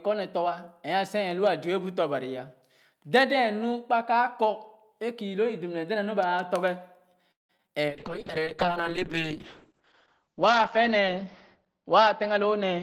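From 7.31 to 7.70 s the speech breaks up with repeated packet loss, heard as a robotic sound. Four gaps fall within under half a second. The receiver covered about 205 ms by extending the preceding sound, and the longest gap was 178 ms. Another 60 ms is simply absent. Concealment accounts for roughly half of that span, which produces the choppy sound and the chopped-off fragments.

At 7.90 s a call bitrate drop begins and lasts to the end of the recording. The encoder was pushed from a full-quality rate down to one that sounds like it is around 7 kbps. Its audio bandwidth was narrowed from 20 kHz to 8 kHz. The speech loses its top end and air, turns coarse and watery, and stays at its worst for about 2 s.

Between 8.18 and 8.66 s, a jitter buffer slow-down stretches the audio to 93% speed. The receiver was building up a reserve by repeating single pitch periods. It added 41 ms in total, so syllables drag slightly while the pitch stays unchanged. 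This stretch also carries the low-bitrate coloration.

From 12.28 to 12.78 s a jitter buffer speed-up pushes playback to 118%. The buffer was holding more audio than its target, so the receiver trimmed short pitch-period segments in quick succession, cutting about a tenth of a second. The speech sounds rushed and clipped at the same pitch. It still carries the muffled, band-limited quality from the bitrate drop.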